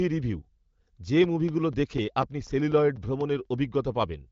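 From 1.24 s to 3.45 s the speech carries CD scratch ticks: ten short, evenly spaced clicks, roughly four or five per second, none longer than a few milliseconds. A blemish on the disc passes the laser once per revolution and corrupts more data each time than error correction can rebuild, so the player conceals the damaged samples by interpolating or muting them. Each concealment is heard as a brief tick or tiny gap, repeating at the rotation rate. The speech band stops near 7.5 kHz with clear articulation, consistent with AMR wideband (HD Voice) at one of its higher bitrates.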